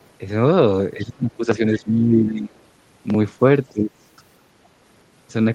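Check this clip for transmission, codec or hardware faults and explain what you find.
Two kinds of fault appear: the talker's speech is turned down in three places, and a very faint scrap of the far-end voice leaks through once. The audio's top end stops near 12 kHz, consistent with the call codec band limit.

Speech suppressed in double talk, 0.96 to 1.62 s, 1.8 to 2.53 s and 3.72 to 3.93 s. The likely cause is an echo canceller that could not tell the near-end talker from loudspeaker echo while both spoke, so it ducked the speech by up to roughly 20 dB, leaving dips and gaps.

Other side's voice leaking through, 2.54 to 2.59 s. Just after the second suppression, a brief fragment of the far-end voice slips through, very quiet, around 40 dB below the speech, likely residual loudspeaker echo the canceller failed to remove from the microphone.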